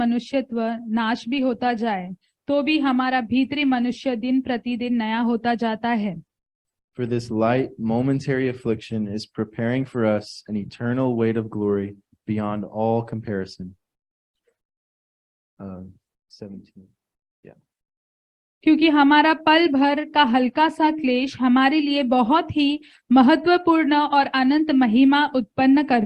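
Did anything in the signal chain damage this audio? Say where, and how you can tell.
No, nothing in the signal chain damaged this audio.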